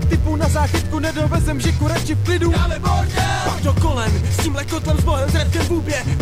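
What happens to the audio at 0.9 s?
At 0.9 s the audio carries a mains buzz that runs through the whole clip. Sharp switching spikes at twice the 60 Hz mains rate add a ladder of 60 Hz harmonics reaching into the kilohertz range, heard as a steady raspy buzz roughly 20 dB below the signal.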